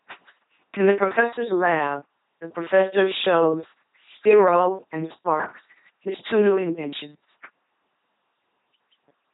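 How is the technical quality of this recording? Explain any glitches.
Technical quality is poor: the speech has passed through an LPC-10 vocoder, and the damage runs through the whole recording.

From start to finish, each moment is rebuilt by a low-order vocal tract filter fed either by a pulse train or by noise, never a blend. The result is a buzzing, mechanical robot voice, with buzz or hiss where the voicing choice goes wrong. The heavy damage fits a 2.4 kbit/s stream. A spectrogram shows smeared, evenly spaced harmonics and nothing above 3.9 kHz.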